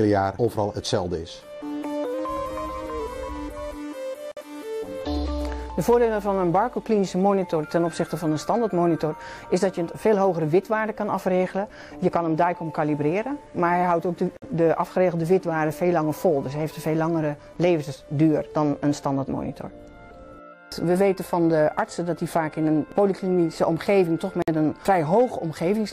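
From 2.14 to 3.0 s, a clock-matching stage likely made a drift correction step, speeding playback about 5.3%, so the sound jumps roughly 90 cents sharp, then snaps back. Separately encoded pieces were joined untrimmed, leaving encoder delay and padding: a gap at a join of about 53 to 54 ms opens at 4.32, 14.37 and 24.42 s, every 10 s, with smeared edges.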